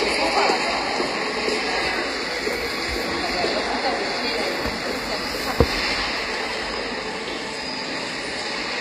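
Throughout the clip, the treble sounds synthetic and gritty, and nothing reaches above about 14.9 kHz. This is likely HE-AAC compression at a low bitrate, around 24 kbps. The upper band is copied from lower frequencies, so its harmonics do not line up.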